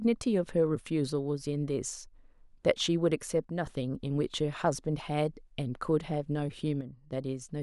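At 3.44 to 3.65 s and again at 6.81 to 7.13 s, the speech abruptly falls by about 6 dB and then jumps back, a sudden dip rather than a fade. The likely cause is one channel dropping out, halving what both channels shared once mixed to mono. On the waveform, the envelope steps down to about half its height with sharp edges. A spectrogram shows the whole band dimming uniformly for each stretch.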